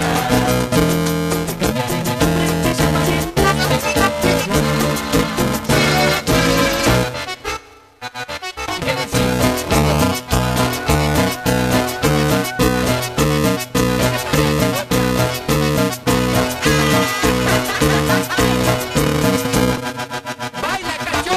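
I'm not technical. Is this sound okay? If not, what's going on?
No. The whole clip has a steady robotic buzz or rattle running under the sound, a bit like a fast motor, at about 375 pulses per second. It is there only while something is playing. This is buffer tearing. The program feeding audio to the playback hardware has fallen out of step with it. In each small chunk of audio, roughly half is stale material from about 5 ms earlier, joined on with hard edges. That rhythm fits a 128-sample buffer.

At 19.77 s there is a separate short chirp or blip. This is damaged data in a compressed stream. A tiny stretch of the compressed file was corrupted, so the decoder misread it and lost its place for a moment. It then found its footing again at the next clean point in the stream.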